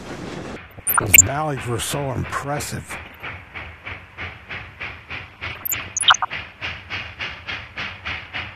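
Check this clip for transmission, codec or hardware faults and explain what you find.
There's DAB burbling in three patches: 0.68–1.21 s, 3.05–3.29 s and 5.29–6.30 s. Weak reception lets bit errors slip past error correction into the MP2 data. Corrupted samples then put short noise blips in single sub-bands, and corrupted scale factors make sub-bands jump in level for up to a frame, leaving burbling blips over the sound.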